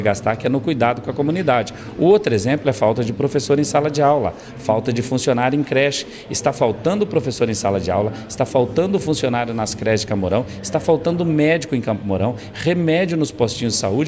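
Listening closely, nothing in the audio stood out as a technical fault at any point.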